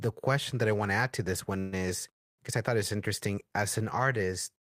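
A call audio freeze runs from 1.59 to 1.80 s. The last sound is held as a fading buzz or hiss, then the speech resumes where it stopped, with nothing lost but about 126 ms late. Delayed packets likely emptied the jitter buffer, so the receiver filled the wait.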